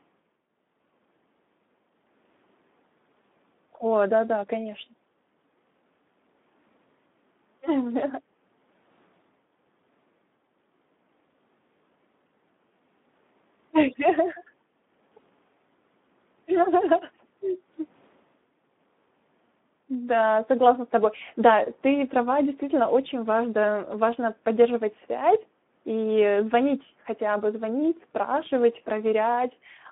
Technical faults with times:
0.00-29.92 Speex codec

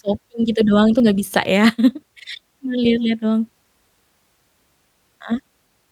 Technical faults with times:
1.00 dropped buffer (overrun)
2.08 dropped buffer (overrun)

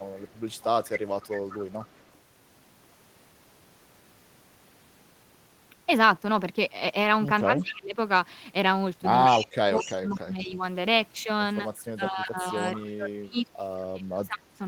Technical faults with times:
0.16-2.04 echo leak
7.44-7.97 speech suppressed in double talk
7.59-7.74 echo leak
9.25-10.19 echo leak
9.28-10.63 speech suppressed in double talk
11.63-14.61 speech suppressed in double talk
12.57-13.42 echo leak

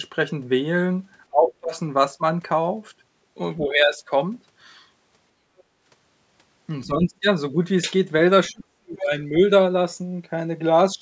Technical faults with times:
1.31-1.74 speech suppressed in double talk
3.58-3.99 speech suppressed in double talk
5.58-5.63 other side's voice leaking through
6.86-7.25 speech suppressed in double talk
8.50-9.41 speech suppressed in double talk
8.97-9.06 other side's voice leaking through

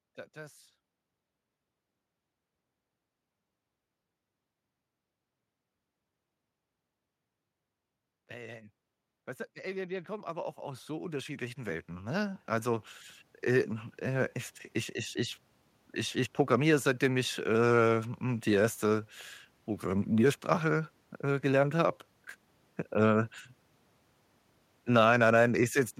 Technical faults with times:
9.61-14.38 automatic gain rising

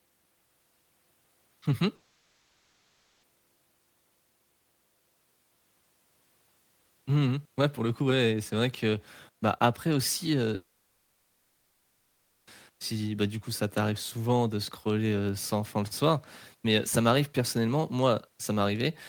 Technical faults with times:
1.95-3.26 long network dropout
10.55-12.50 long network dropout

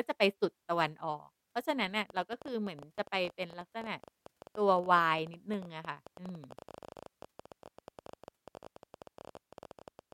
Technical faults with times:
2.10-10.13 train of clicks
6.80-7.08 CD stuck on one turn

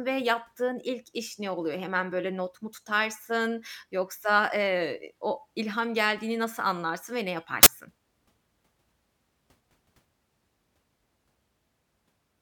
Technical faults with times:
7.63-7.66 file tags played as audio

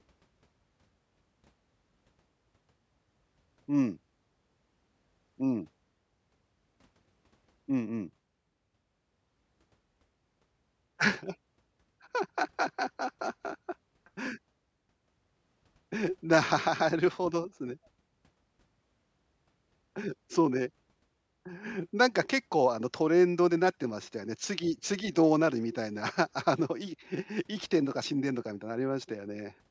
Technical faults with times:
none

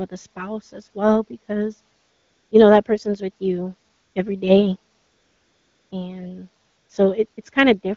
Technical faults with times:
1.99-2.51 AMR comfort noise
3.93-4.15 AMR comfort noise
4.97-5.91 AMR comfort noise
6.67-6.89 AMR comfort noise
7.33-7.37 AMR comfort noise

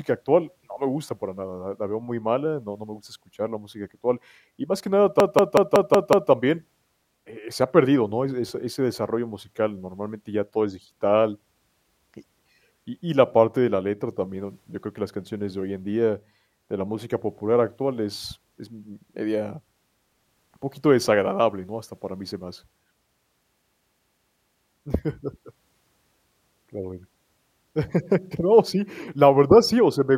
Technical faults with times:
5.20-6.32 system hang loop
23.59-24.71 system hang loop

